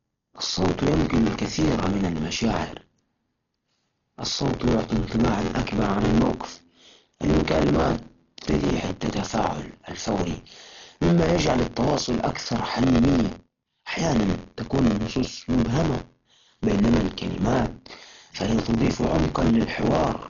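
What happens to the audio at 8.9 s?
At 8.9 s, as throughout the clip, the speech carries buffer tearing: a steady robotic buzz at 86.1 Hz, which fits a 512-sample buffer. In every period, about a fifth of the buffer replays audio from one lap earlier, roughly 40 ms old, with hard joins on each side. Unlike random dropouts or clicks, the rattle keeps a fixed rate and vanishes in silence.

The sound is also dull, with nothing above 7 kHz, and a rough, fluttering noise surrounds the tonal parts. That points to heavy damage from likely Dolby Digital compression at a bitrate around 40 kbps, with empty frequency lines filled by dither noise. A simple low-pass filter would dull the sound without adding that flutter.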